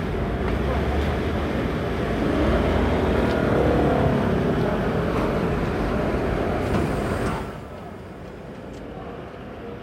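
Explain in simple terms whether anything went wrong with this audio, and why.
Nothing went wrong here; the level eases up and down like someone gently moving a fader, and that's just a normal part of how these sounds were handled.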